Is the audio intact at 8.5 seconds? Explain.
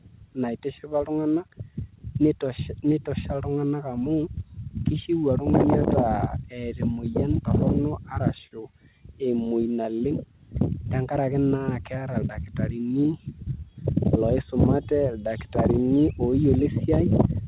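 No. At 8.47 to 8.53 s there is a short stall from a late packet. A packet missed its playout time, the jitter buffer ran dry, and the receiver filled about 40 ms by stretching the last sound it had, then resumed where it left off once the packet arrived. Nothing is lost, but the sound at that point hangs a moment too long, with a faint buzzy or dipping quality.

The stall sits on top of clock drift between sender and receiver, present through the whole clip. The sender's clock runs slow, by roughly 3 percent, so the receiver's buffer keeps draining and has to patch the gap by repeating short pieces or briefly running empty. Around 8.5 s this adds to the same kind of small timing hiccup that recurs at uneven intervals elsewhere, in audio already limited to below 4 kHz by the call path.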